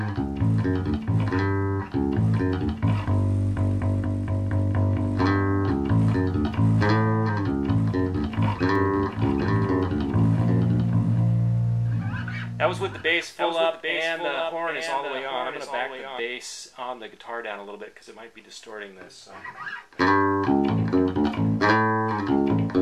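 From 8.76 s to 16.20 s a doubled audio track is heard. A second full-band copy of the sound runs about 0.7 s behind the original, roughly 5 dB quieter. It has no decay and no room colour, so it is not an echo. It starts and stops abruptly at those times. The likely cause is the same audio being captured again through a slower path, or an edit that holds two copies out of step.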